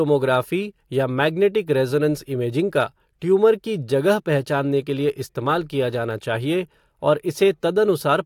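No technical faults can be heard anywhere in the speech; the signal stays continuous and stable throughout.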